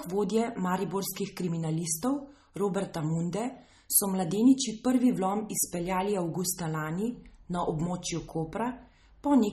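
From start to finish the speech sounds watery and swirly, with nothing above 13.2 kHz. That points to MP3 compression, likely at a low bitrate around 32 kbps. Starved of bits, the encoder chops the treble and lets weak frequency lines flicker on and off between frames.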